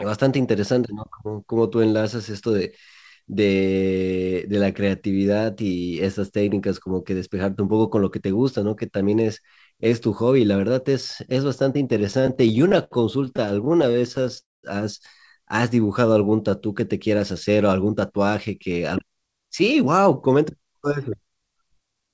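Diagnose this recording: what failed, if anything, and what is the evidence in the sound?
The failure is in network delivery and the receiver's jitter buffer. The speech passes through a G.722 call codec at 64 kbps, with nothing above 8 kHz. From 12.0 to 14.38 s the speech has repeated stalls, a stutter. There are 33 short hitches. The longest lasts 68 ms. Together they add about 403 ms, and concealment fills 17% of that span. Nothing is lost. Packets arrived late, the buffer ran dry again and again, and each time the last sound was stretched until data returned.

From 14.40 to 14.65 s there is a call audio freeze. The last sound carries on briefly as a fading buzz or hiss. Then about 200 ms of silence follows. The gap lasts 231 ms in total, and the speech resumes exactly where it stopped. No content is missing. The likely cause is packets held up in the network long enough to empty the jitter buffer completely. 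The delay through the call path then increases by 231 ms.

From 15.70 to 16.52 s there is a jitter buffer slow-down. The speech runs at 86% of its normal speed with the pitch unchanged. Sounds are drawn out. The receiver repeats single pitch periods and fragments of pauses to rebuild its reserve. This adds 120 ms to the stretch. The mechanism is time-stretching by duplication, not resampling, so the pitch stays where it was.

From 18.72 to 22.10 s there is a jitter buffer speed-up. The speech runs at 109% of normal speed at the same pitch. It sounds hurried. The buffer now holds more audio than its target, as happens after delayed packets arrive in a bunch. To cut latency the receiver removes short pieces one or a few pitch periods long, many times in a row. Roughly a third of a second is removed in total.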